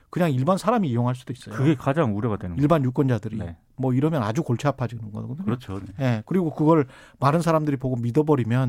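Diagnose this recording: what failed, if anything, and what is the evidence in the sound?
Nothing failed: there is no audible evidence of a fault anywhere in the recording.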